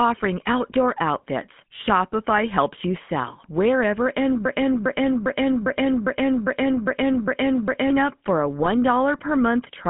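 The whole clip runs through a GSM full-rate codec. The sound is confined to roughly 150 Hz to 3.4 kHz. The codec rebuilds speech from a vocal-tract model driven by a coarse pulse excitation. That leaves a plainly audible buzzy, gravelly roughness, consistent with a 13 kbps GSM link.

From 4.45 to 7.90 s there is a broken-record loop. A 0.40 s fragment repeats back to back, nine times. The stream likely stalled and kept resending its last buffer. The audio meant for that span is lost. Normal playback resumes with "up for a".

Just after "up for a", GSM bit errors hit from 8.62 to 8.68 s. Corrupted filter, pitch or gain values reached the decoder. The 60 ms burst fits three 20 ms frames. The spectrum or level goes wrong there, giving a short squawk.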